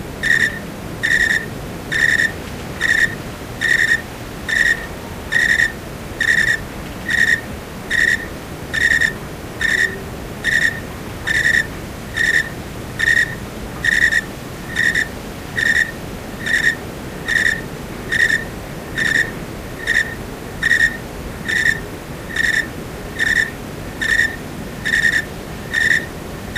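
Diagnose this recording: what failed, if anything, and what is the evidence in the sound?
Low bit depth without dither runs throughout the recording: grainy distortion tracks the sound, with quiet passages turning gritty. The likely cause is a sample-format conversion that rounded to about 7 bits with no dither, leaving error roughly 25 dB below the signal.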